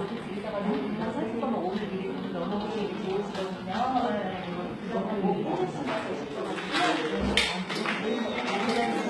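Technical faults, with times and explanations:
Throughout, HE-AAC compression, likely: the treble is rebuilt from copied lower bands shaped by a coarse envelope, so its harmonics misalign with those below and high detail sounds harsh and synthetic. The heavy damage and nothing above 11.8 kHz fit a bitrate near 16 kbps.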